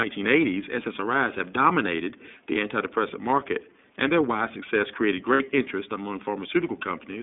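From start to end the speech passes through the iLBC codec. The line band runs from 150 Hz to 3.6 kHz, so nothing higher survives. Each frame's excitation is coded independently, leaving a plainly audible rough, synthetic edge that fits 13.33 kbps with 30 ms frames.

From 5.33 to 5.43 s, between "their wide success created" and "interest among", lost iLBC frames leave a 60 ms gap. The decoder repeats the last pitch cycle blended with noise, heard as a brief buzzy held vowel, which fits two missing frames. The speech recovers almost immediately.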